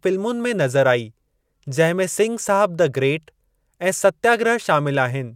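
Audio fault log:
No faults heard anywhere in this speech recording.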